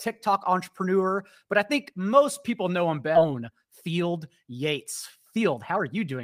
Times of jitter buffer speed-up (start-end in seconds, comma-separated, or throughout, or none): 3.25-4.86, 5.37-6.20